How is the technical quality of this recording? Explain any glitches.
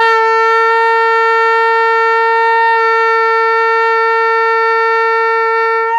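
The recording holds together technically, with no glitches, dropouts or other faults to be heard anywhere in the audio.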